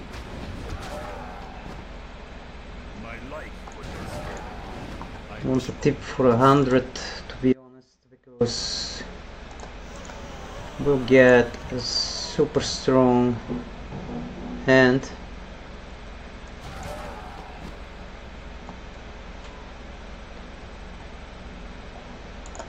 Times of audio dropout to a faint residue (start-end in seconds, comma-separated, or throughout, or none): 7.53-8.41